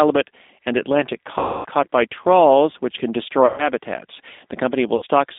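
A narrow, slightly rough and synthetic quality runs through the whole speech clip, with nothing below about 250 Hz or above 3.7 kHz. That is the sound of the G.729 codec at 8 kbit/s, here the G.729A variant. It rebuilds each 10 ms frame from a vocal-tract filter, a pitch predictor and a handful of pulses, so the damage is plainly audible as a rough, slightly artificial edge on the voice.

From 1.39 to 1.66 s, just before "caught by trawls which", the speech smears into a buzzy tone or coloured noise that fades and stays weak as the voice returns. This is VoIP packet loss concealed by the speech codec. About 260 ms of audio went missing, which fits roughly 13 lost packets. The decoder extended its last pitch and filter settings while lowering the gain. Because each frame builds on the one before, the voice takes a moment to recover. The same stretched, fading sound returns from 3.46 to 3.69 s, right after "by trawls which can", where about 120 ms was lost. 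It appears once more, shorter, from 4.96 to 5.05 s, covering about 60 ms.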